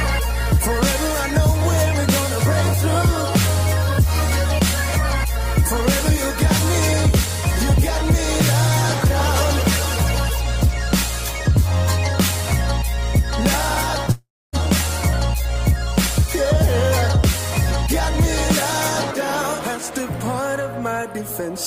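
From 14.11 to 14.56 s the sound decays into a fading buzz, then silence, and resumes with 0.42 s lost. That gap is too long for a brief glitch and is likely a long network dropout.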